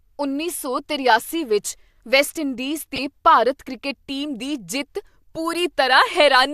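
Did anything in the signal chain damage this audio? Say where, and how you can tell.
Yes. At 2.96 to 2.98 s a short chirp, blip or burst of noise cuts across the speech for about 24 ms, its burst peaking around -10 dBFS, unlike the surrounding sound. This is a corrupt frame decoded at the codec stage: bits in a single compressed frame were damaged, and the decoder played it anyway. Misread gains and spectral codes put energy at the wrong frequencies, so the error lasts about one frame's length and then clears.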